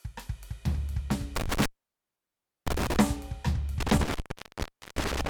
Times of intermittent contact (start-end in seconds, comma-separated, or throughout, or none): 1.36-2.96, 3.80-5.29